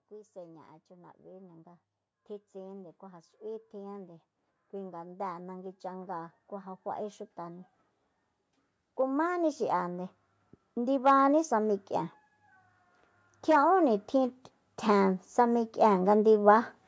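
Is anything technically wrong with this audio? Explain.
Yes. Automatic gain rising shows up twice in this speech: from 2.52 to 7.77 s the level climbs about 10 dB, and from 13.46 to 16.64 s about 6 dB. The gain control judged the input too quiet and ramped up slowly, so voice and background swell together.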